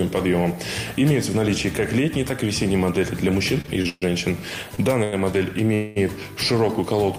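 Repeated stalls (stutter) run from 3.61 to 4.04 s. Packets reached the receiver late and more slowly than they were being played, so the jitter buffer emptied four separate times. Each time, the receiver extended the last sound to cover the wait. Together these fills add up to about 202 ms, nearly half of that stretch, with the longest single hold at 127 ms. Nothing is lost, but the audio drags and stumbles forward in uneven jerks.

Two short stalls from a late packet follow, at 4.76 to 4.80 s and at 5.04 to 5.14 s. In each, the next packet was not there when it was due, so the buffer ran dry. The receiver held the current sound until the packet arrived, then resumed from the same point. The first hold lasts 20 ms and is just a brief smear. The second stretches a sound by 86 ms, a drawn-out moment with a slight buzz or dip.

A call audio freeze falls at 5.74 to 5.98 s. For 217 ms the sound stops moving forward and the last moment is sustained as a fading buzz or hiss. 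It never drops to silence, and the audio then picks up exactly where it halted. The likely cause is packets being held up in transit long enough to drain the jitter buffer, so a 217 ms pause is inserted without any audio going missing.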